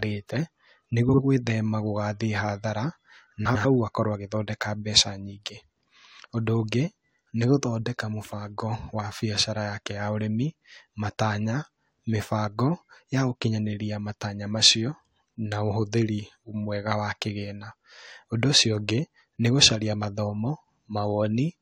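At 1.09 to 1.19 s and again at 3.45 to 3.65 s the speech has frames out of order: two adjacent blocks were decoded in swapped sequence, so each short stretch plays back-half first. The first swap exchanges 46.4 ms blocks, which fits two frames each; the second swaps 92.9 ms blocks, fitting four. Each sounds like a brief garbled flutter. On a spectrogram the formant tracks jump and restart at those joins, and the waveform shows abrupt steps there, with no lost time.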